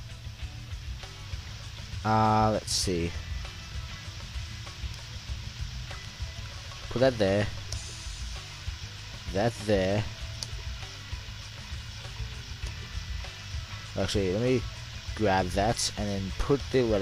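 No technical faults can be heard anywhere in this audio. There is nothing to report at any point along its course.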